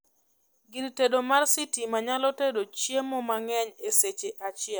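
No technical faults are audible anywhere in the recording.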